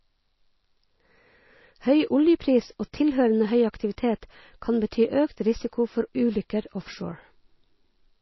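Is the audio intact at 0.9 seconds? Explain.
No. At 0.9 seconds the speech carries the same damage heard across the whole clip, most likely from MP3 compression. Nothing remains above 5.8 kHz, so s sounds lose their hiss. The faint parts of the sound warble and swirl as weak frequency lines drop in and out from frame to frame, the pattern of a starved encoder, which fits a bitrate near 24 kbps. A plain low-pass filter would dull the treble just as cleanly but leave no watery swirling.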